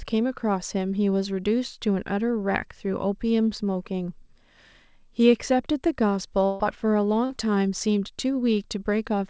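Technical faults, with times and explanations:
6.46–6.62 s, burst of packet loss: about 140 ms of the G.722 stream never arrived in time. The receiver held the last sound and faded it, then jumped ahead. Unlike a brief concealment, it is long enough to hear as a dying buzz or hiss with audio skipped.
7.26–7.31 s, short concealed packet loss: about 40 ms went missing and was patched by extending the preceding sound, then blending back into the real signal. It is far shorter than the earlier burst, so it passes as a quick smear or wobble, with no audible gap.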